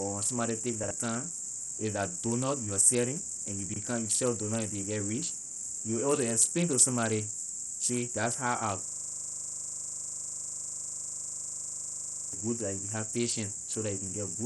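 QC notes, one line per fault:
Throughout: Bluetooth SBC compression, likely cause of the dulled, flickering treble and gritty noise; spectrogram shows patchy, banded highs, consistent with roughly 64 kbps.
0.84–0.91 s and 3.69–3.76 s: chunks out of order, a 23 ms block playing two blocks late; jumbled blip, waveform shows three hard discontinuities.
8.88–12.33 s: system hang loop, one 40 ms piece repeated 86 times before "good that you have"; a 25 Hz buzz, identical repeating waveform cycles.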